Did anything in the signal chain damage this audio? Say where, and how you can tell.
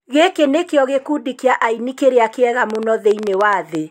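Yes: a train of clicks, 2.70 to 3.76 s, about ten same-shaped pops at 9.6 per second, unevenly spaced, roughly 10 dB above the speech. It is likely analogue-wiring interference; these are added pulses, not gaps from dropouts.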